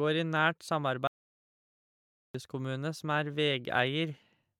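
A speech recording that cuts to total silence, with no room tone, from 1.07 to 2.35 s: an audio dropout to silence, likely a lost input written as silence.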